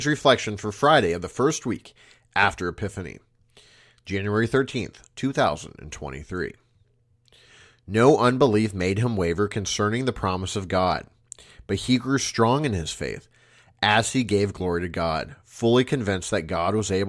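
No technical faults can be heard in this recording.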